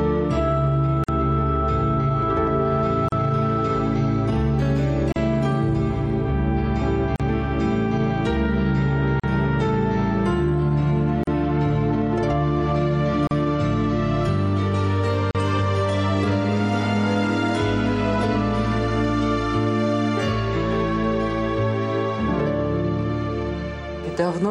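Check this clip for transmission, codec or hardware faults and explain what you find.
There's one fault, recurring every 2 s: a gap at a join of encoded pieces, at 1.04, 3.08, 5.12, 7.16, 9.20, 11.24, 13.27 and 15.31 s. Separately encoded chunks kept their start delay and end padding, so the sound cuts out, with smeared edges, for 46 ms at first and 38 ms after that, then picks up where it stopped.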